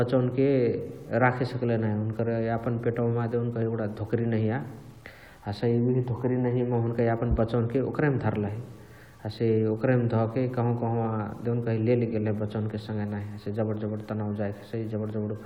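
A speech recording with grainy distortion from start to finish that rides on the signal itself: it roughens as syllables decay and breaks into a buzzy sputter in the quietest tails and pauses, where the audio toggles between a couple of steps or drops to dead silence. That is low bit depth without dither, likely from truncation to a word length that fits about 9 bits, with the error sitting roughly 40 dB below the speech. A dithered reduction would instead leave a steady, even hiss.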